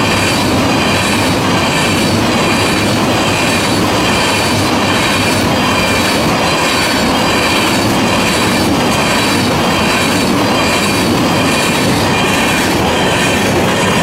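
No technical faults can be heard anywhere in this recording. Nothing in it calls for a timestamp or further comment.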